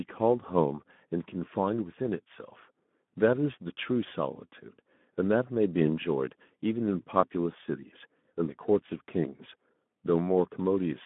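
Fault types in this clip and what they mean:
Speex codec: The speech sounds hoarse and grainy from start to finish, with a rough, noisy edge on every syllable. It is held inside a narrow band from about 150 Hz to 3.5 kHz, so nothing bright sits above it. Speex is a CELP speech codec that squeezes the excitation signal into very few bits. The plainly audible roughness points to a low quality setting, consistent with about 11 kbps, and the band to a telephone-style line.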